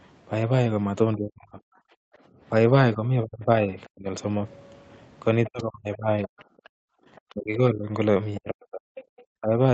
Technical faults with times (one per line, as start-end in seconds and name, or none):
1.15-1.60 speech suppressed in double talk
1.88-2.41 background gated by the echo canceller
2.95-4.14 speech suppressed in double talk
5.45-7.34 other side's voice leaking through
5.48-6.33 speech suppressed in double talk
6.61-7.06 background gated by the echo canceller
7.34-9.57 speech suppressed in double talk
8.35-9.22 other side's voice leaking through